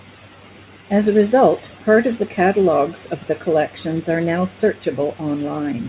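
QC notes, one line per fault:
No faults heard in this speech clip.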